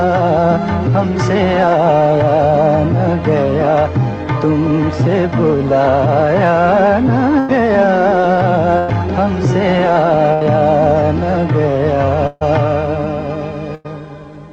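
The audio has bursts of packet loss at 7.39, 8.78, 10.33, 12.27 and 13.75 s, each dropping about 80 to 140 ms. The receiver extends and fades the preceding sound across each gap, then resumes later; the 12.27 s burst ends in a brief silence.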